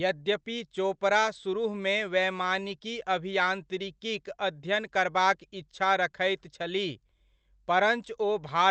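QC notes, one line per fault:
Nothing to flag here: the speech just comes through a normal call path, with the top end stopping around 8 kHz in the way you'd expect from Opus at a modest bitrate.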